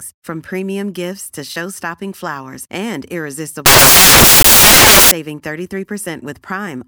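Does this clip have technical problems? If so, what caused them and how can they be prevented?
Yes. Samples built from the wrong bytes, from 3.66 to 5.11 s: the speech gives way to loud, harsh broadband noise for about 1.5 s. The reader combined each sample's bytes wrongly, through a one-byte offset, swapped byte order or a wrong alignment assumption, so the rapidly fluctuating low bits ended up as the large part of every value. To prevent this, verify the declared sample format, endianness and frame alignment before decoding.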